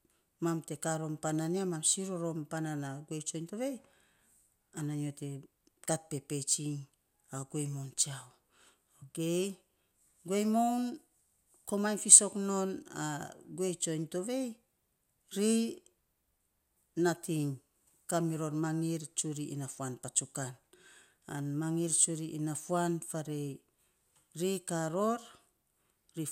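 Speech recording with no technical faults to point out. Nothing in it calls for a time stamp or a cause.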